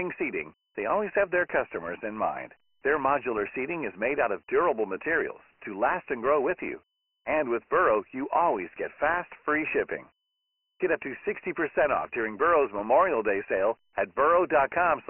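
Speech throughout, sounding thin and band-limited, with nothing above 3 kHz and a gritty hiss riding on the voice for the whole clip. That is heavy Dialogic VOX ADPCM damage: 4-bit coding at 24 kbps, which fits a 6,000-sample-per-second telephony file.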